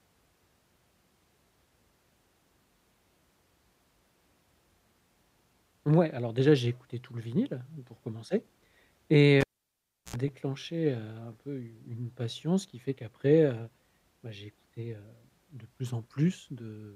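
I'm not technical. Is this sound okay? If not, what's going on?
No. Cable pulled and plugged in at 9.41 s: a pop, 0.7 s of near silence, and a brief 60 Hz hum (unlike a plain dropout), then sound returns before "déclenché heu un peu".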